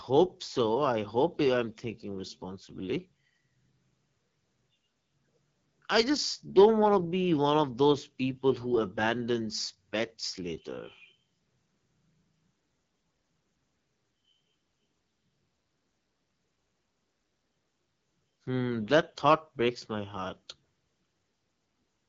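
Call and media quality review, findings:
AMR wideband (HD Voice) codec, throughout: rough, raspy speech texture; band ends near 7.4 kHz, with a noise-filled 6.4 to 7 kHz band instead of true detail. Sounds like one of AMR-WB's lowest modes, around 8.85 kbit/s. A narrowband codec would sound muffled below 4 kHz.

Hard clipping at 6.59 to 6.66 s (about 3 dB overdrive), 7.59 s and 9.07 s: brief crackle on speech peaks as flat-topped waveforms add high harmonics. Unlike the steady codec rasp, it appears only on the loudest moments.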